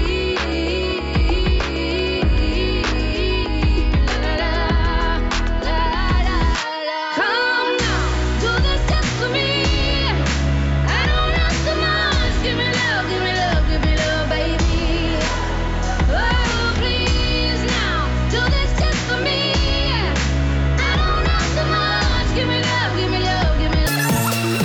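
From 23.87 s to the end at 24.64 s, a wrong sample rate fault sets in: samples captured at one rate are pushed out far faster with no conversion, and the ratio of 2.76 fits 16 kHz audio being played at 44.1 kHz. Because speed and pitch are tied to that single ratio, the final stretch races by at 2.76 times normal speed and jumps up by 17.6 semitones, giving a squeaky, chipmunk-like rush.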